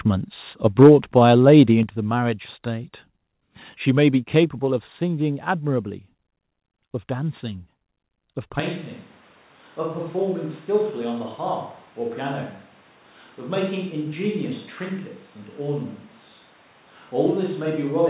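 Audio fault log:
0.8–0.9 s and 1.48–1.6 s, microphone overload: peaks turn harsh and crackly, about 5 dB and then about 1 dB over the converter's limit. The likely cause is too much input gain, so the converter flattens the tops, heavily in the first burst and only slightly in the second.
0.83 s, 1.83 s and 4.44 s, microphone volume stepped down: voice and background drop abruptly by about 2, 6 and 3 dB. This is likely the call software's gain control cutting input volume in single steps.
8.6 s to the end, switch to a distant microphone: the voice suddenly becomes hollow and roomy, thinner in the bass and roughly 5 dB quieter, with room noise around 30 dB below speech. The likely cause is a farther microphone taking over from the close one, with nothing above 4 kHz through the narrowband call codec.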